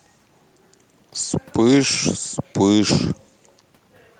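Nothing in the recording stood out as a technical fault on listening.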